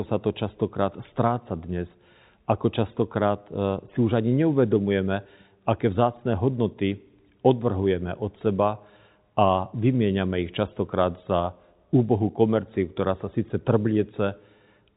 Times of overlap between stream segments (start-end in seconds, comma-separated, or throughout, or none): none